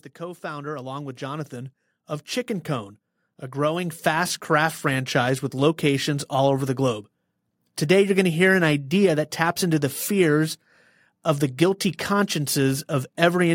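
Automatic gain rising occurs twice: the gain control judged the input too quiet and stepped its gain up gradually, from 0.18 to 1.81 s by about 7 dB, then from 3.51 to 5.17 s by about 5 dB, ending just before "with locations all over". Voice and background swell together.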